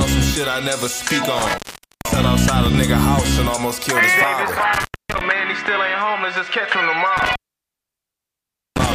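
At 1.39 s an intermittent contact opens: a loose plug or cable connection breaks the signal path, and the sound drops out for about 474 ms before returning by 2.24 s, with crackle at both edges as the contacts scrape. The same fault recurs at 4.73 s, open for about 250 ms until 5.21 s, and again at 7.17 s, where the gap lasts about 1.4 s and runs almost to the end at 8.93 s. Faint hiss remains during each gap.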